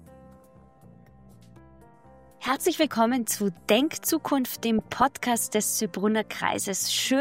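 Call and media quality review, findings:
Short noise blips over the sound at 0.33–1.32 s, 2.44–2.81 s, 4.79–5.04 s and 6.87–7.00 s. DAB burbling: weak reception lets residual bit errors, around 0.3–0.5 percent, corrupt MP2 samples and scale factors, so single sub-bands jump in level for up to a frame.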